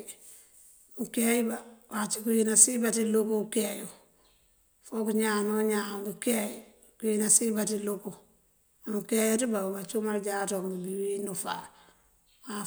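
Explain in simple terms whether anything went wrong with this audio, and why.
Nothing went wrong with this audio that a listener can hear.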